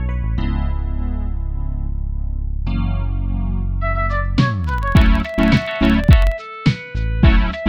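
Between 4.64 s and 6.37 s the audio carries a filter restarted on every block fault. The filter loses its internal state at each block boundary and begins from zero, so every block opens with a brief transient. These repeat at about 21.5 Hz, heard as a low buzz or rapid ticking whose strength rises and falls with the level of the sound. The spacing fits a 2048-sample processing block.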